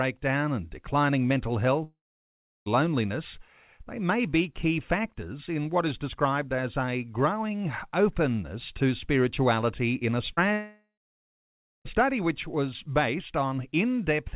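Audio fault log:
1.84–2.68 s and 10.53–11.87 s, long network dropout: the sound stops for about 0.82 s and then about 1.32 s. Each gap opens with a short buzzy continuation of the last sound that fades, leaving about 0.71 s and 0.97 s of silence before the sound resumes further on, with nothing replayed. Likely no packets arrived and the concealment gave up. Unlike a brief concealed loss, the smear dies out and a true hole remains.
10.34–10.39 s, short concealed packet loss: about 40 ms never arrived and was bridged by roughly 30 ms of synthetic continuation, heard as a quick smear or wobble that blends straight back into the real sound. It is far too short to decay into silence, which separates it from the dropout that follows at 10.53 s. The repair sits within the call's narrow band, with nothing above 4 kHz, consistent with a G.711 mu-law link.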